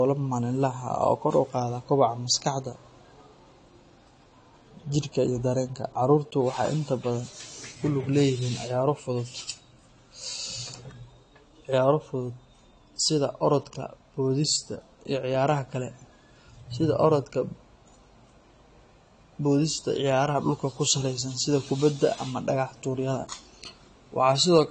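From start to finish the speech is dull and smeared, with nothing above 10 kHz and a plainly audible fizzy warble on sibilants. The cause is likely AAC compression. The encoder drops the top band and coarsely quantises the rest, which fits a bitrate around 32 kbps.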